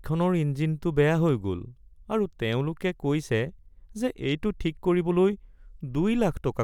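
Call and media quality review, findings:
No technical faults found in the speech signal; level, continuity and timing hold steady across the whole recording.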